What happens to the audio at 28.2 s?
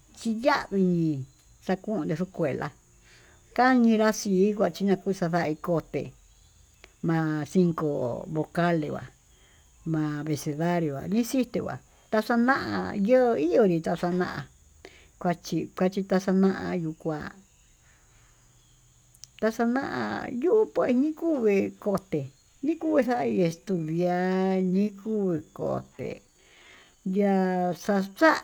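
A time-stretched section covers 28.2 s, running from 23.03 s to the end of the clip at 28.43 s. Here the speech plays at about 0.67 times its original pace, most likely because software lengthened this stretch to fill a set duration, repeating short slices of the signal so the pitch stays put. The slowdown arrives abruptly, and the drawn-out speech drags.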